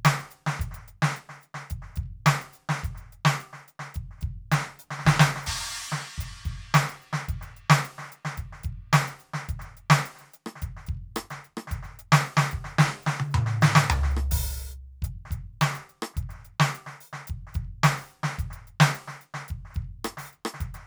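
It's a piece of music, and there's nothing technically wrong to point out anywhere in it.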